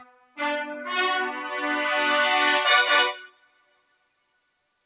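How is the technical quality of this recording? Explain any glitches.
The technical quality is compromised by a speech-oriented noise suppressor that keeps fighting the material. The sound is band-limited to nothing above 4 kHz, as on a narrowband G.711 A-law call path at 64 kbps.

Throughout the clip, the level pumps and flutters, with held sound and tails ducking while attacks punch through. This is a noise suppressor applied to music or sounds. The processing, tuned for voices, treats steady or sustained content and ambience as background noise and pulls it down, then releases when a transient arrives. The resulting swing of around 20 dB makes the texture breathe unevenly and sound thinned.

From 0.00 to 0.39 s and again from 3.15 to 4.75 s, the sound sinks noticeably below its surroundings, by about 21 dB at its deepest. Decays seem clipped short rather than fading naturally. This is sound cut by the noise suppressor. 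During these stretches the material was steady or decaying enough that the suppressor classed it as noise and attenuated it hard, so the passage goes hollow and recessed instead of sustaining.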